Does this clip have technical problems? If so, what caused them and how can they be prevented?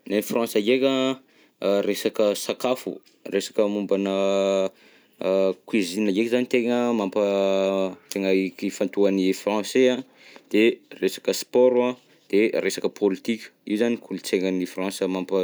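No, there are no technical problems to prevent here.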